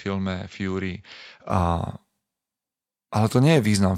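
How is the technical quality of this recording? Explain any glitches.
The recording has one glitch at the start. From 0.0 to 1.5 s, a likely input switched to a poorer device: the sound is dull, about 5 dB quieter with a new faint noise floor and nothing above 7.6 kHz, then clears abruptly without a gap. Because tone, level and noise change together, it points to a different microphone rather than simple filtering.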